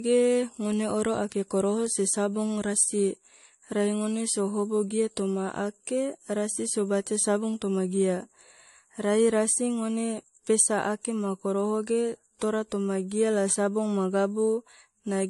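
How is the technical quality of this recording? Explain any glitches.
The speech carries a layered codec sound from start to finish, with nothing above 11.3 kHz. This points to transcoding between lossy codecs, likely an MP3 encode at a low bitrate later re-encoded as AAC-LC at a similar rate. The second encoder spends its bits reproducing the first one's artefacts and then adds its own, so two kinds of artefact overlap instead of one consistent texture. That mixed character, with the lower cut-off of the chain holding, sets it apart from a single low-bitrate encode.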